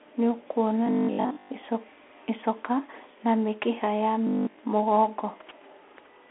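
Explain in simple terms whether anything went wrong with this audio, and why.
Yes, two things went wrong. First, the whole clip has passed through a Bluetooth CVSD headset codec, the narrowband link a wireless headset uses for calls. It squeezes the speech into a thin telephone-like band, roughly 250 Hz to 3.4 kHz, and nothing above 3.8 kHz survives. The damage is plain to hear. The voice sounds muffled and boxy, s sounds turn scratchy, and a grainy hiss sits underneath.

Second, there is robotic sound from repeated short buffers twice: from 0.87 to 1.51 s, and from 4.27 to 4.59 s, right after "icoka na mĩkiha ya". The speech turns into a stiff, metallic buzz at about 50 Hz. The likely cause is audio arriving late, so the software kept replaying tiny slices, about 20 ms each, instead of the real sound. Most of the speech in those moments is replaced this way.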